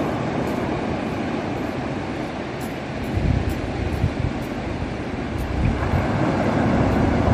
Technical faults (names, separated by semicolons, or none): compressed frames skipped